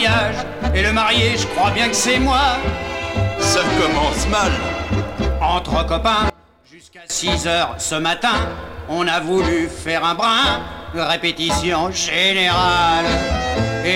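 From 6.30 to 7.10 s, one channel inverted is the likely cause: one stereo side flips polarity, so material common to both channels cancels when summed. The sound drops by about 22 dB for those 0.8 s, leaving a faint residue.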